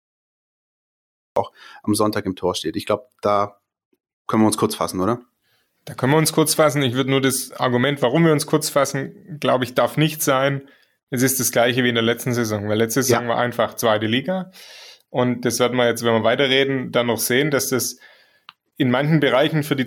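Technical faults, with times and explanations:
0.0–1.36 s, cut-off start: The clip opens on dead digital silence. At 1.36 s, speech bursts in already in the middle of a sound, with no natural attack or fade-in. The level leaps from nothing straight to full speech, so the first sound seems sliced off at its front edge. This happens when recording or streaming begins late. Everything before 1.36 s was never captured, leaving silence followed by an abrupt mid-sound entry.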